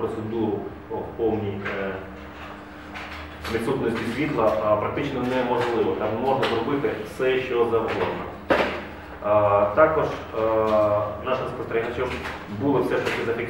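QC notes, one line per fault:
Nothing to log here; no faults turned up anywhere in the audio.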